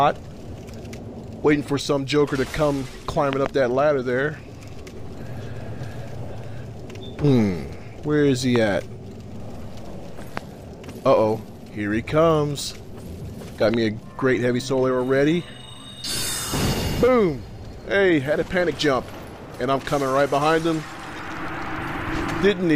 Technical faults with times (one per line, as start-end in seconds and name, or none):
3.33-3.48 loud pop
8.56-8.58 loud pop
10.37-10.39 loud pop
13.74-13.76 loud pop